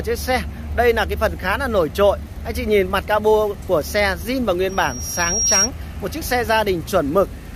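Loudspeaker feedback squeal from 4.69 to 5.70 s: the microphone re-captures its own loudspeaker, and a 5.6 kHz tone swells over about a second to roughly 5 dB above the sound.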